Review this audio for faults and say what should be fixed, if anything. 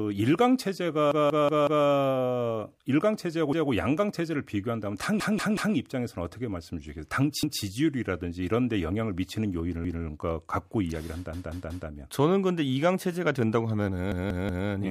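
Repeated buffer stutters occur at 1.12–1.86, 3.53–3.72, 5.20–5.76, 7.43–7.62, 9.85–10.03, 11.33–11.89 and 14.12–14.68 s. Each 186 ms chunk replays one to four times with hard joins, which fits an 8192-sample buffer. Enlarging the playback queue or raising thread priority would keep fresh audio arriving in time.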